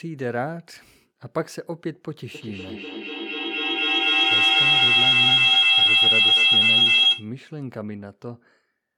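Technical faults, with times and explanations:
2.34–7.36 s feedback howl: a tone around 3 kHz rises to about 14 dB above the speech, as a microphone-to-loudspeaker loop gains level on each trip of roughly 200 ms.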